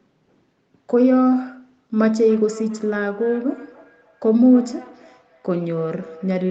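Feedback echo between two devices sets in at 2.19 s and runs to the end of the clip. A second device in the same room is playing this call's audio aloud, and the microphone captures it again. Its echo canceller can only remove what its own speaker plays, so the speech returns roughly every 300 ms at about 23 dB below the direct speech. Each repeat sounds thinner and more ringing, and the echoes trail behind the speech throughout the section, heard within the band that stops at 8 kHz.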